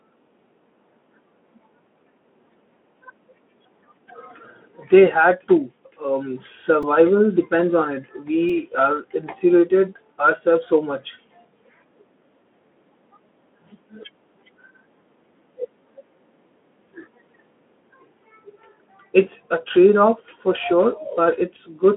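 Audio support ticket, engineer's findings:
Brief clicky buzz at 6.83 s, just before "depends on", and 8.49 s, just before "are insulated ourselves so". Repeated buffer: playback starved, about 2.7 ms chunk replayed three then two extra times, fitting a 128-sample buffer. Narrowband Speex path, silent above 3.7 kHz.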